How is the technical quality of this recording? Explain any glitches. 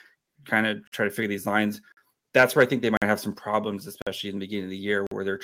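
The recording has three kinds of fault: regular gaps, a clipped passage, and a sudden level drop.

Gap between chunks: short holes of about 48 ms at 0.87, 1.92, 2.97, 4.02 and 5.07 s. They fall every 1.0 s, where silence sits between chunks. The first comes after "kind of".

Microphone overload: from 2.37 to 2.63 s, after "to figure these lines", peaks exceed the limit by about 5 dB. Roughly one percent of samples are flattened, giving a harsh crackle.

Microphone volume stepped down: at 3.38 s, voice and background drop by about 4 dB at once. This is likely the call software lowering the input after that overload.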